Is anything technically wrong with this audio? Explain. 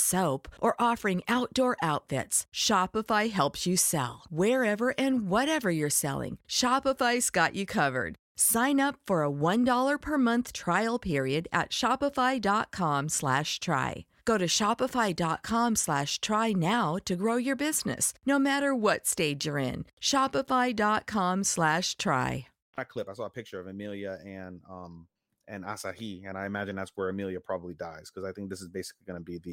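Yes. A block of digital silence occurs at 16.10 s in this speech clip. For about 4 ms the sound drops straight to silence and then resumes, with no fade in or out. That usually happens when the output buffer isn't filled in time, so the playback path sends zeros instead. Because both edges are abrupt, the waveform jumps at each one, and the gap is so short it's heard as a single tick rather than a hole.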